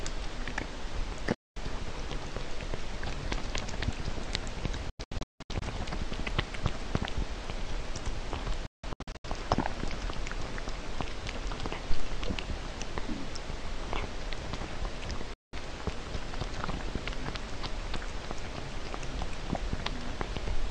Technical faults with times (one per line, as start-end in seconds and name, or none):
1.34-1.57 digital broadcast dropout
4.89-5.62 digital broadcast dropout
8.66-9.25 digital broadcast dropout
15.34-15.54 digital broadcast dropout